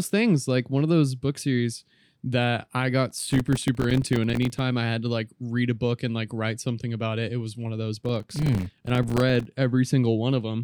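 Speech with processor overload crackle, from 3.11 to 4.59 s and 8.05 to 9.45 s. Many buffers of a few milliseconds miss their deadlines, leaving tiny silent gaps heard as gritty crackle.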